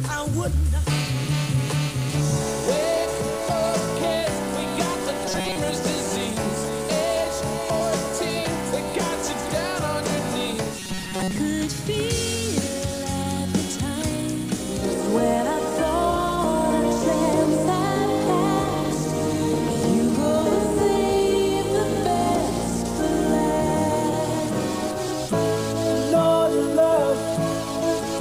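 From 5.26 to 5.56 s and 10.79 to 11.38 s, robotic sound from repeated short buffers turns the audio into a metallic 188 Hz buzz, likely from repeating roughly 5 ms buffers. Spectrograms show rigid evenly spaced harmonics; waveforms show identical repeating cycles.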